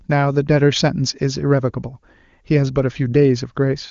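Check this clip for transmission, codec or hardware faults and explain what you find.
I find no transmission, codec or hardware faults in this clip.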